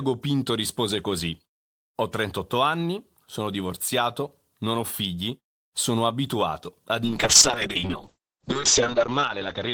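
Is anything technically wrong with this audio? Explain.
Yes. From 7.05 s to the end, a call bitrate drop takes the encoder from 32 kbps to 6 kbps, holding the lowest rate for 1.28 s. The coarser coding sounds rough and watery, and the top band falls from 20 kHz to 8 kHz. Unlike packet loss, the sound stays continuous, with no gaps.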